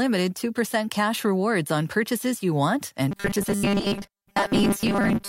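Speech that turns into a rigid, metallic 200 Hz buzz from 3.11 s to the end: robotic sound from repeated short buffers, likely a 5 ms buffer replayed over most of the audio while fresh input is skipped.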